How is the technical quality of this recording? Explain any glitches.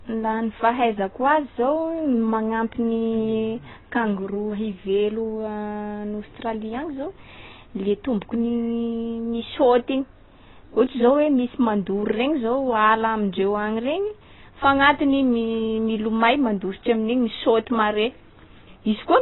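The recording is heavily degraded by lossy coding across its whole length.

AAC compression, throughout: the sound stops dead above about 3.9 kHz, which points to a very low bitrate around 16 kbps. The likely cause is an AAC-LC encoder discarding high frequencies and coarsely quantising the rest, leaving the speech dull, smeared and fizzy on sibilants.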